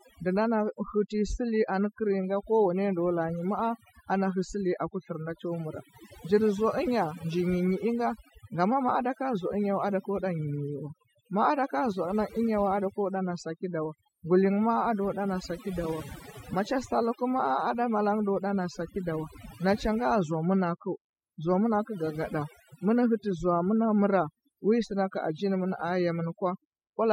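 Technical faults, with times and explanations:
Throughout, overdone noise removal: the noise reducer on this speech was pushed way too hard, so any frequency band sitting close to its idea of the noise gets pulled right down or switched off. The background noise drops away, but the gaps are left with little twinkling specks where stray bands flicker on and off, and the quieter parts of the voice got eaten along with the noise.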